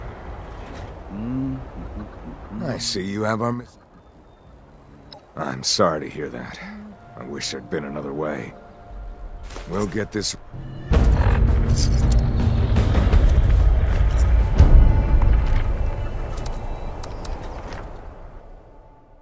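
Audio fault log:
No faults can be heard anywhere in the clip. Nothing in the audio calls for an entry in this log.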